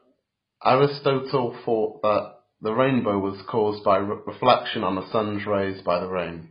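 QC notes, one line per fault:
Throughout: AAC compression, likely from heavy low-bitrate coding near 16 kbps; nothing above 5.1 kHz, dull smeared speech, warbling sibilants; spectrogram shows hard ceiling.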